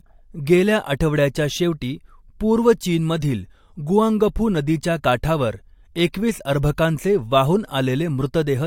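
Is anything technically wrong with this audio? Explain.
Yes. Throughout the speech, nothing above 16.6 kHz and stacked coding artefacts point to transcoding between lossy codecs, likely MP3 re-encoded to AAC-LC, compounding both codecs' distortions.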